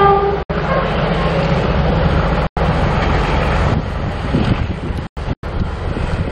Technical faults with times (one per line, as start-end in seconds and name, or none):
0.43-0.50 digital broadcast dropout
2.47-2.57 gap between chunks
5.07-5.17 gap between chunks
5.33-5.43 digital broadcast dropout